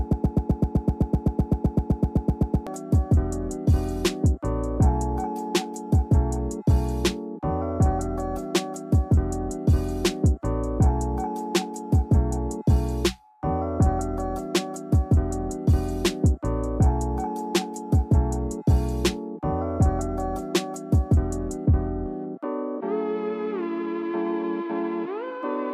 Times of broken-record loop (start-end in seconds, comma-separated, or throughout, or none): 0.00-2.67